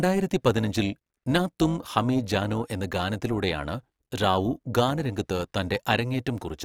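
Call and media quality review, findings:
Overlap-add ripple across the whole speech clip: metallic buzz with extra tones, level dipping about 6 dB at around 400 Hz frame rate. Frame-based resynthesis stage, window overlap not summing to constant gain.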